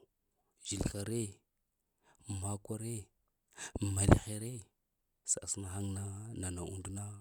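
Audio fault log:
Nothing to log here: this bit of speech comes through without a single technical fault that I can hear.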